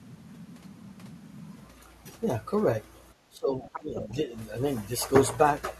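From 3.29 to 4.32 s the speech dips, falling by about 15 dB at worst. This is speech suppressed in double talk, likely an echo canceller ducking both sides. From 3.66 to 4.14 s the other side's voice is leaking through, faint, roughly 15 dB below the speech. Residual loudspeaker echo is the likely cause.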